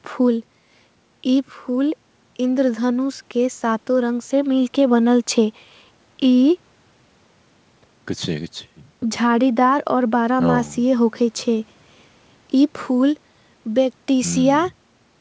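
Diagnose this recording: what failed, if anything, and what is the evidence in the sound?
Nothing failed here: the speech sounds like an ordinary call with nothing above 8 kHz, which fits a wideband call codec such as G.722 doing exactly what it's meant to do.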